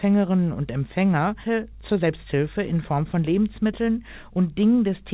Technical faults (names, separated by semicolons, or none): skip ahead; jitter buffer speed-up